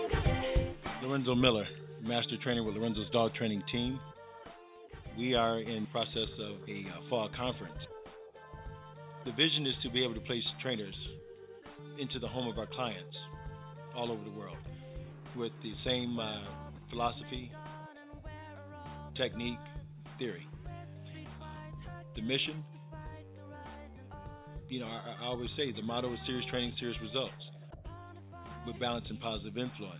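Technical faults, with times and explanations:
No technical faults detected in this audio.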